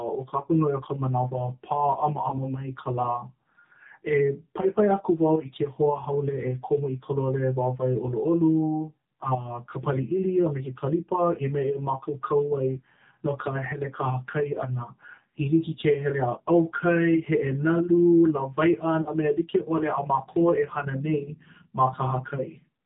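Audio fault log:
throughout AMR narrowband mobile codec: nothing above 4 kHz comes through, and the speech sounds plainly buzzy and synthetic because a vocal-tract model driven by a few pulses per subframe replaces the real waveform, which fits the low 7.4 kbps mode.
2.30–2.37 s and 19.02–19.12 s lost AMR speech frames: the decoder covered the gaps by repeating the last good pitch and vocal-tract settings at falling gain. The first, just before "mai ka", is a brief dip or warble; the second, 40 ms long and consistent with two lost frames, drags and sags further before the speech returns weak or rough.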